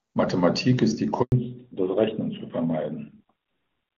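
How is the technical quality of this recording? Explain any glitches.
The recording is marred by two call-path faults a little over a second in, after which it never returns to full quality. Until then the HD Voice (AMR-wideband) path is clean, consistent with its top rate.

Handover gap, 1.22 to 1.32 s: The sound cuts out for about 100 ms while the call is moved from one network link to another. No speech frames are delivered during the switch, so the audio fades within a few tens of milliseconds and stays silent until the new link carries sound again. Anything said in that window is gone. On a waveform this is a flat, near-zero stretch. On a spectrogram it is a blank vertical band across all frequencies.

Fallback to narrowband, 1.32 s to the end: When the new link comes up, the call is no longer in HD Voice. It has dropped from AMR-WB at 23.85 kbit/s to the older AMR-NB narrowband codec at 12.2 kbit/s. 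Narrowband coding carries nothing above 4 kHz, so the sibilance and airy detail disappear, and the speech sounds duller, boxier and rougher than before the gap. A spectrogram shows energy reaching well above 4 kHz up to 1.22 s, then a hard horizontal ceiling at 4 kHz from 1.32 s onward.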